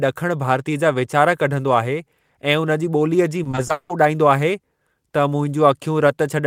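From 3.43 to 3.91 s the speech breaks up with repeated packet loss, giving a robotic sound. Five gaps land in under half a second, the longest about 180 ms. Each is patched by stretching the last bit of sound, so over half that stretch is filler and it comes out choppy.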